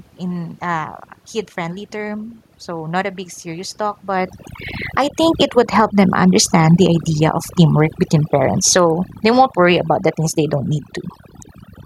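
Throughout, overdone noise removal leaves a lowered background flecked with twinkling specks, since bands near the noise estimate are cut away with quiet speech detail. After "a big serious talk", from 4.1 to 5.76 s, automatic gain falling sinks the level by about 9 dB, and again from 6.64 to 10.05 s, before "the things they don't", by about 7 dB. Unlike a talker moving back, the background sinks together with the voice.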